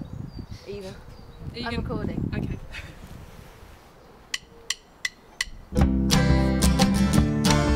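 No technical faults can be heard anywhere in the audio; the signal stays continuous throughout.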